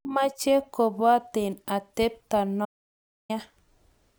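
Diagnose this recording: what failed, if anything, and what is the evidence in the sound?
The speech stops dead at 2.65 s and returns at 3.30 s. That is an audio dropout to silence lasting 0.64 s. The gap is silent with no room tone. The likely cause is a lost input link or device while the recorder kept writing.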